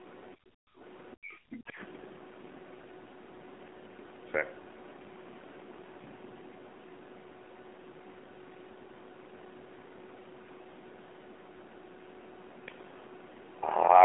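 Throughout the speech, the AMR narrowband mobile codec limits everything to a telephone band, with nothing above 3.7 kHz. Its buzzy, synthetic texture, which fits a low rate near 7.4 kbps, marks codec damage rather than a simple low-pass filter's clean dullness.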